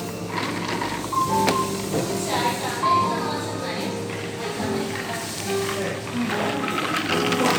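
Nothing stood out on listening to this recording of sounds.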